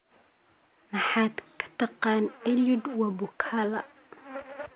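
No technical faults are audible.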